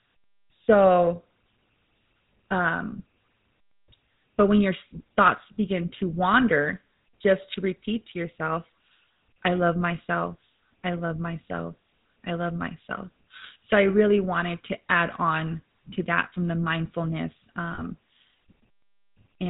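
Speech passed through the GSM full-rate codec, with a buzzy, gravelly roughness and nothing above 4 kHz, which fits the 13 kbit/s full-rate coder. A plain low-pass filter would only dull the sound, but here the pulse-driven vocal-tract model adds grit to the voiced sounds. Lost GSM frames appear from 17.74 to 17.82 s, just after "that from the mindfulness". About 40 ms of audio, which fits two missing frames, is filled by repeating the last good frame. Unlike a clean dropout to silence, this gap is held as a brief metallic ring.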